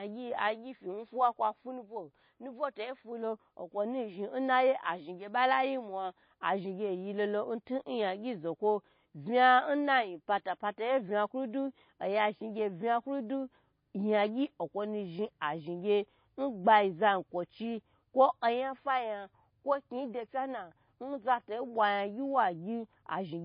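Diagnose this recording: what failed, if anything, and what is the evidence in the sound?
MP3 compression throughout: nothing above 5 kHz and a plainly audible swirl, likely a bit-starved encoder, fitting 24 kbps, cutting the treble and dropping weak frequency lines.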